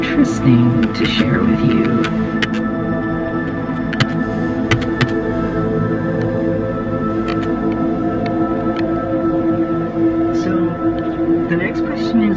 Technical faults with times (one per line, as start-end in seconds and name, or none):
none